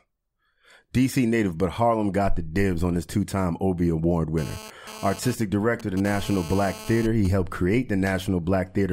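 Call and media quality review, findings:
GSM phone buzz, 4.38 to 7.27 s. Nearby 2G handset in data transfer, bursting at 216.7 Hz; audio input stage rectifying the RF pulses. Result: hard, raspy 217 Hz buzz, harmonic-rich, about 16 dB below the speech, coming and going with the data activity and unrelated to the speech itself.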